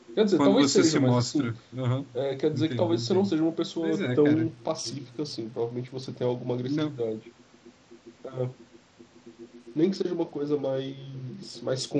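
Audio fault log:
4.27–6.86 s and 9.56 s to the end: Bluetooth SBC bit pool drop. Treble dulls and gritty noise rises as fewer bits starve the upper sub-bands and coarsen quantisation, consistent with a fall from 28 to about 9.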